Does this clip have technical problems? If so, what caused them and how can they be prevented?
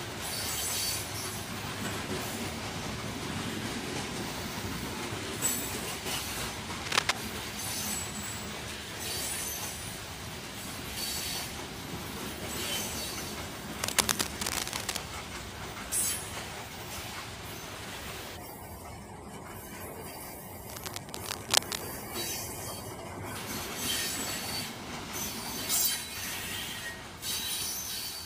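Yes. Cable scratch noise appears three times, from 6.82 to 7.12 s, 13.82 to 14.98 s and 20.70 to 21.83 s. Each burst is a dense, uneven scratching that sits about 5 dB above the sound itself. The likely cause is a worn cable, connector or control being moved, so that its contact resistance jumps rapidly and injects noise. Replacing or cleaning worn connectors and securing cables so they cannot move during recording prevents it.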